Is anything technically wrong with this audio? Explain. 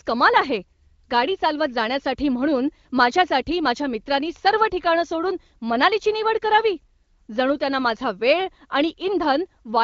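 No, nothing stood out as technically wrong on listening to this speech clip.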